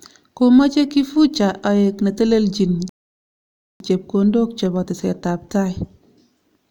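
At 2.89 s a rebuffering stall halts the speech for 0.91 s until 3.80 s; unlike a dropout, it resumes exactly where it stopped, skipping nothing.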